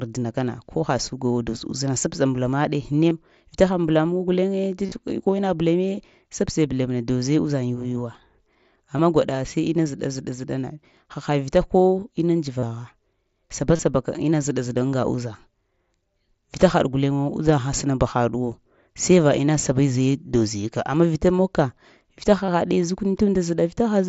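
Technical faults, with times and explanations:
3.10, 4.86–4.92, 8.98, 12.60–12.63, 13.76–13.79 and 22.46–22.48 s, concealed Bluetooth headset packet loss: Short stretches of the link drop out, from 15 to 30 ms each, and about 52 ms scattered across 60 ms near 4.9 s. The receiver fills each gap by repeating the closest-matching recent waveform. The runs hold a brief buzzy tone at full level, then a slight warble as the mSBC wideband sound resumes.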